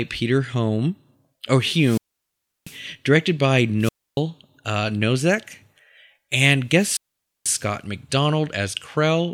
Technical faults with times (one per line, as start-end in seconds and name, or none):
1.77-2.82 wireless microphone squelch dropout
3.79-4.20 wireless microphone squelch dropout
6.71-7.63 wireless microphone squelch dropout